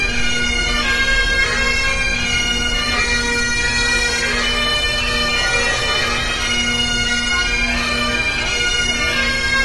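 Everyday sound with AAC compression damage throughout: nothing above 11.5 kHz, plus audible smearing and warble, likely from AAC-LC at a low bitrate, perhaps around 32 kbps.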